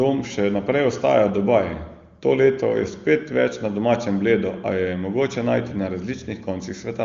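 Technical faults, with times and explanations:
The speech comes through the AMR wideband (HD Voice) codec at a rate that fits its 23.85 kbit/s top mode, with no audible damage and the spectrum stopping near 7.3 kHz, as expected for that path.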